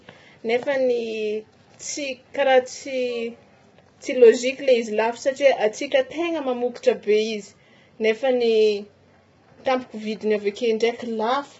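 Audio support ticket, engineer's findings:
Speech rough and grainy throughout, noise between harmonics, nothing above 7.7 kHz. Likely low-delay AAC compression (AAC-ELD); short frames blur pitch harmonics, bitrate near 16 kbps.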